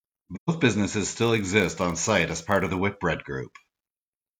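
AAC frame loss with muting runs from 0.35 to 0.49 s in this speech clip. A stretch of compressed audio lasting about 128 ms, consistent with roughly three lost frames, never reached the decoder, so it filled those frames with silence. The overlapping transform windows on either side fade the speech down into the gap and back up after it. The result is a soft-edged dropout.

A block size mismatch with padding follows from 1.19 to 2.78 s. One stage hands over blocks shorter than the next stage expects, and the shortfall in each block is filled with zeros. That puts a tiny silent gap into every block, repeating at 46.9 Hz, which fits a 1024-sample read block. It is heard as a low buzz laid over the speech. The slowdown is a factor of 0.999, too small to notice.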